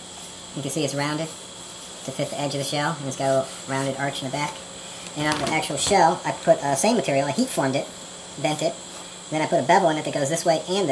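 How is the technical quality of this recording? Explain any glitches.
The whole recording plays too fast and too high because of a wrong sample rate. From start to finish, everything runs 1.5 times its natural speed and sits 7.02 semitones higher. The samples were played at a rate half again as fast as the one they were captured at, with no conversion, which fits audio recorded at 16 kHz being played at 24 kHz. On a spectrogram, every frequency sits 1.5 times higher and every event is shortened by a third. The waveform looks compressed in time.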